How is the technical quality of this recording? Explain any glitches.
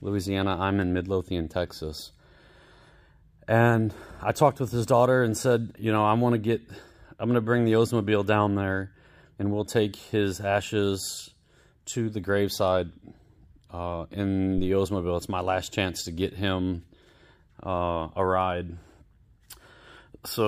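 One glitch stands out. At 14.58 s there's a phantom power thump, a deep low bump peaking around -19 dBFS and dying away within about 24 ms, as supply switching jolts the coupling capacitors.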